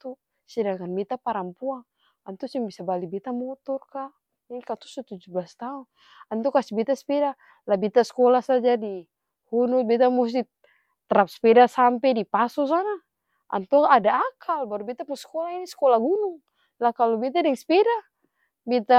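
Nothing stood out as a technical problem anywhere in the recording on listening.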